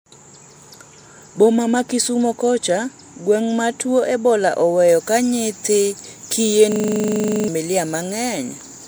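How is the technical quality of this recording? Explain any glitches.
There's one real glitch. From 6.72 to 7.48 s there's a system hang loop: the driver stalled while the hardware kept replaying one 40 ms buffer, so you get a rough 25 Hz buzz-stutter repeating about twenty times, and around 0.7 s of speech is simply gone.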